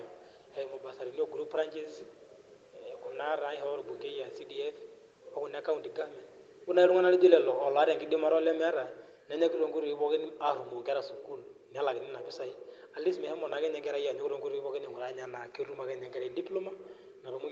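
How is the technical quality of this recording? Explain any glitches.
The recording has one glitch, a gain drop in the middle of the speech.

Automatic gain falling, from 6.69 to 8.81 s: the automatic gain control judged the input too loud, or its background noise too strong, and eased its gain down by about 6 dB over those two seconds. The speech and the room noise behind it sink together, unlike the talker's own shift in distance around 6 s.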